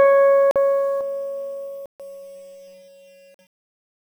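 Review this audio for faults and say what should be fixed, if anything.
Block of digital silence at 0.51 to 0.56 s, 1.86 to 2.00 s and 3.34 to 3.39 s. The music drops abruptly to silence and returns with no fade. The two short gaps last about 46 ms, which fits a missed 2048-sample buffer. The middle gap is 139 ms, consistent with three such buffers going unfilled in a row. To prevent it, give the audio thread enough priority and buffer headroom that it always fills the output in time.

Channel delay (comb filtering) from 1.01 s to the end. One channel arrives roughly 0.4 ms late, and when the two are summed to mono, the material common to both cancels at evenly spaced frequencies. The first notch sits around 1.5 kHz, with further notches above it. That is why the music turns hollow and phasey from that point on. To prevent it, keep both channels sample-aligned through the processing chain before any mono fold-down.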